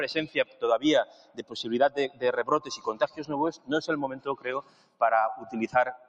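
Throughout the clip there's a speech-oriented noise suppressor left running on material that isn't speech, a noise suppressor applied to music or sounds. It keeps misreading sustained parts and ambience as noise, so the level rides up and down by somewhere around 15 dB. Onsets mostly punch through, but anything held or decaying gets pulled down, which gives the audio a pumping, fluttery, thinned-out feel. The worst spots are where a sound is cut by the noise suppressor: 0.28 to 0.62 s (about 11 dB down), 1.05 to 1.53 s (about 13 dB), 2.60 to 2.87 s (about 7 dB), 4.62 to 5.01 s (about 13 dB) and 5.38 to 5.54 s (about 5 dB). In each one the steadier part of the sound sinks or its tail is clipped short while the attack survives, so those moments sound hollowed out.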